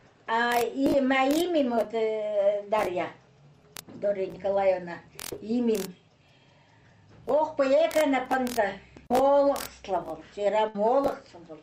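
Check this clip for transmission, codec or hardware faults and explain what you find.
One transmission fault is audible, near the end. A burst of packet loss runs from 10.68 to 10.75 s: the receiver stretches the last sound for about 60 ms, fading it into a held buzz or hiss, then resumes with roughly 60 ms skipped. On a spectrogram it shows as smeared, repeated bands that dim, followed by an abrupt jump.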